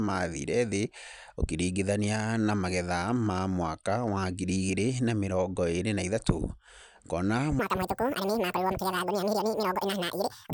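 At 7.59 s the speech suddenly jumps up and speeds along to the end of the clip. This is a wrong sample rate fault. The samples play back faster than they were captured, with no conversion. Speed doubles, and pitch rises 12 semitones, a full octave. That fits audio recorded near 22 kHz but played at 44.1 kHz. Voices turn thin, squeaky and rushed, like a fast-forwarded tape.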